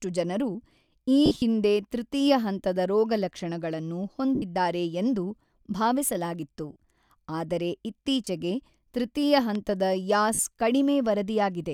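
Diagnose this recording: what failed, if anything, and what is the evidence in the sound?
Bluetooth LE Audio frames were dropped on the wireless link, and the LC3 decoder concealed the gaps. It replayed the last spectrum with scrambled phase, so the speech briefly turns to a noisy smear at 1.26–1.42 s (110 ms lost across 160 ms, longest run around 50 ms), 4.35–4.42 s, 6.72–6.76 s, 8.25–8.27 s and 10.34–10.39 s. The gaps fit 10 ms frames.

A loud pop sits at 9.55–9.57 s. It is a single sharp click peaking a few dB above the speech, while the speech carries on underneath. It is likely a sudden voltage step from a switch, static discharge or driver glitch in the analogue or output stage.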